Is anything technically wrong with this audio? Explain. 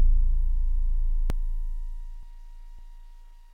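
Yes. At 1.3, 2.23 and 2.79 s the sound jumps abruptly forward with no gap, skipping about 0.1 s, 0.3 s and 0.1 s respectively. This is likely a dropped buffer (overrun): samples were overwritten before being read, and the remaining audio was spliced straight together.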